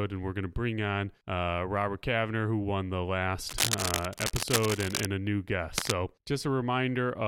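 Cable scratch noise runs from 3.48 to 5.06 s after "who won the", then 5.74 to 5.94 s after "a new". Dense rustling, roughly as loud as the speech, likely from a worn cable being moved.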